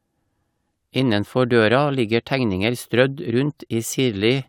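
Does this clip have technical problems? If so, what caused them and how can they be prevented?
No, there are no technical faults.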